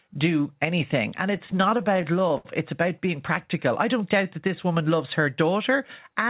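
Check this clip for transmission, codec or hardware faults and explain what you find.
There's one real fault here, a stretch of repeated stalls (stutter) between about 1.36 and 2.47 s, just before "it's about being practical." Thirteen short hiccups, the longest around 68 ms and about 185 ms in total, came from packets arriving late so the jitter buffer kept running dry. The receiver stretched the last sound to cover each wait, so nothing drops out, but the speech drags and judders through that stretch. The band stops at 4 kHz throughout, which fits a narrowband G.711-style call path.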